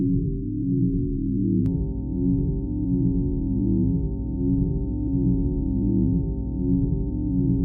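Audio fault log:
1.66 to 7.65 s, mains hum: from 1.66 s to the end, the power line couples into the signal path, most likely through a ground loop or a nearby transformer. This lays a steady 60 Hz tone under the audio, with some low harmonics. It sits fairly high, only around 10 dB below the wanted sound, so the low drone is plainly audible until the clip stops.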